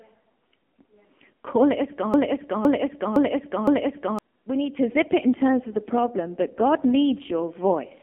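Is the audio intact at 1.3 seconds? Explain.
No. At 1.3 s, as throughout, the speech sounds buzzy, synthetic and muffled, with nothing above 3.5 kHz. This is the AMR narrowband mobile codec rebuilding the sound from a coarse vocal-tract model, heavily enough to suggest roughly 6 kbps.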